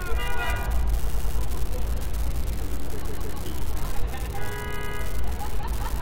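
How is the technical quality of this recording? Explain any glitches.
The quality is poor: a constant fault runs through the whole recording, and the playback stutters three times.

An unreliable data bit is present throughout. One marginal data line flips its bit in a random share of samples, and each error lands as an identical spike. The result is a steady crackle that remains audible in the quiet passages as well as the louder ones.

Repeated frames occur at 1.06 to 1.37 s, 3.05 to 3.36 s and 4.77 to 4.98 s. A block of compressed frames was decoded again. The first event replays a 104.5 ms block three extra times, the second a 156.7 ms block twice, and the third a 104.5 ms block twice. Each event is heard as a stutter. Together they add about 0.84 s to the playing time.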